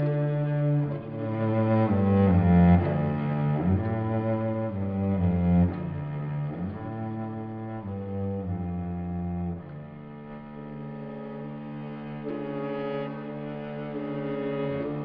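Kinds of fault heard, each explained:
No kinds of fault are heard in this clip, so there are none to explain.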